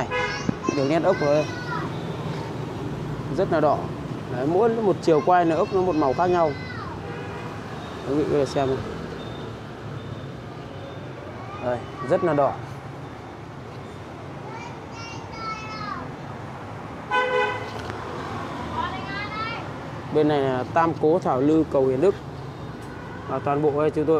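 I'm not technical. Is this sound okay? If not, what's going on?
No. There are two loud pops. The first comes right at the start, from 0.49 to 0.71 seconds, as two sharp thumps in quick succession. The second is a single short pop at about 17.90 to 17.92 seconds. Both jump well above the surrounding audio, which keeps going underneath. The likely cause is a sudden electrical jolt, such as a plug, a switch or a static spark, adding a brief spike to the signal.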